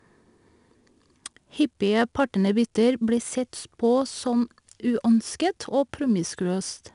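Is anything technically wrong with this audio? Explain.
Yes. Throughout the speech, 4-bit ADPCM compression leaves a gritty hiss that rises and falls with the level, plus roughness on sharp onsets. Each sample is coded as a coarse 4-bit step from a prediction, so quantisation noise tracks loudness. Nothing sounds above 10.6 kHz, which fits a rate near 89 kbps.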